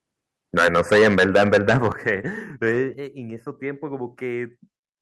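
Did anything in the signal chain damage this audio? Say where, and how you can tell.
Yes. From 0.57 to 2.09 s the loudest speech peaks are flattened, with a harsh, crackly edge on stressed syllables, driven about 12 dB past full scale and affecting roughly a tenth of the samples. This is microphone overload at the analogue-to-digital converter stage, likely from input gain set too high. It differs from codec distortion because the grit tracks the level of each peak rather than smearing across quiet passages.

Three abrupt drops in level, at 0.93 s (about 4 dB), 1.92 s (about 8 dB) and 2.94 s (about 4 dB), pull speech and background down together within a single instant. This is the microphone volume being stepped down in call processing, likely an automatic gain control reacting to the clipping, since the first two steps land inside the distorted stretch. A compressor would ride the level smoothly and recover. 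These steps are instantaneous and stay down.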